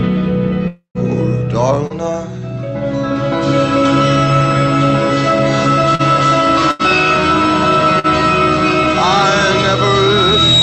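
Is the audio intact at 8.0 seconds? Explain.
No. A burst of packet loss runs from 7.99 to 8.07 s, where the receiver stretches and fades the last sound instead of going silent, then resumes with about 40 ms skipped.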